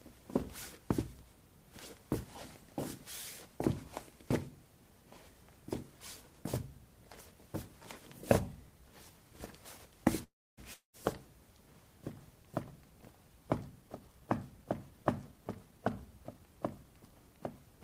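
At 10.23 s the sound stalls: its last moment is stretched into a buzzy, fading tail, then the clip goes quiet for about 0.28 s before picking up exactly where it left off at 10.61 s, with nothing skipped. This is a call audio freeze, likely from packets held up in transit so the jitter buffer ran dry. The receiver covered about 342 ms with the extended tail and silence, and that whole wait is now added delay.

Shortly after, at 10.74 s, there is a second break. Again the last sound smears into a short fading buzz and then about 0.13 s of silence. At 10.96 s the audio returns, but this time it comes in further along, and about 200 ms of material is simply gone. This is a long network dropout: likely no audio reached the receiver for that stretch, so the roughly 198 ms of concealment filled the hole rather than delaying what followed.

From 13.82 s to 16.85 s the audio sounds rushed while its pitch stays put, running at about 109% of normal speed. 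This is a jitter buffer speed-up. The buffer was holding more than its target, as happens when delayed audio arrives in a bunch. To bring the delay back down, the receiver repeatedly cut out tiny pitch-period-length slices, removing about a third of a second in total.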